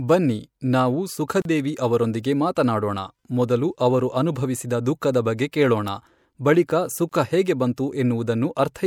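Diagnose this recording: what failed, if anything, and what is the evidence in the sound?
Codec stage: a gap at a join of encoded pieces, twice. The speech drops out for about 34 ms at 1.42 s, just before "ದೇವಿ ಅವರೊಂದಿಗೆ ಮಾತನಾಡೋಣ ಮೊದಲು", and for 25 ms at 7.09 s, between "ದುಃಖದ ಬಗ್ಗೆ ಕೇಳೋಣ ಬಳಿಕ" and "ಹೇಗೆ ಬಂತು". Untrimmed encoder start delay and end-frame padding were left in when the pieces were joined.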